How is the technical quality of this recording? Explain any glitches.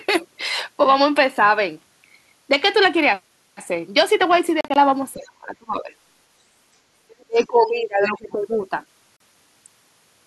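The recording has several glitches, from wireless transmission and from echo cancellation on a call.

Bluetooth dropout, 4.61 to 4.76 s and 9.17 to 9.20 s. Audio packets likely arrived late and were dropped. The first event punches short silent holes, about 75 ms in total, spread over 150 ms. The second is one 37 ms gap.

Speech suppressed in double talk, 5.15 to 5.90 s and 7.11 to 8.33 s. The echo canceller likely mistook overlapping talk for echo. The voice sinks sharply, by roughly 30 dB and then 25 dB.

Other side's voice leaking through, 8.01 to 8.10 s. The canceller likely missed some loudspeaker sound. A faint second voice briefly appears, about 10 dB below the talker.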